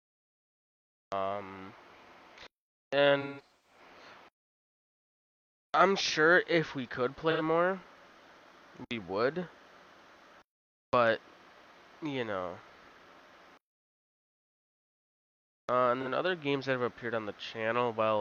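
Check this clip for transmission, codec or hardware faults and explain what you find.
AAC frame loss with concealment occurs three times. Between 3.21 and 3.80 s, about 0.34 s of frames go missing in scattered bursts, the longest run roughly 150 ms. Shorter losses follow at 7.31 to 7.41 s (85 ms) and 16.01 to 16.07 s (43 ms). The decoder rebuilds each gap from the last good spectrum, so the sound turns smeared, noisy and phasey rather than falling to the hard digital silence of a plain dropout.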